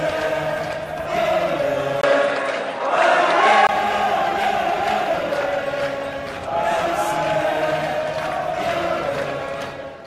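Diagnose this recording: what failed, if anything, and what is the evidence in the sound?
Capture stage, 2.01 to 3.69 s: a 20 ms gap, then nothing above 11.4 kHz, a level shift of about 5 dB and new background noise. This is likely an input switched to a poorer device. A codec narrowing its band would not bring a new noise floor.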